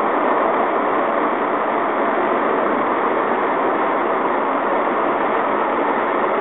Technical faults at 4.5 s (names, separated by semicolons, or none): Bluetooth SBC compression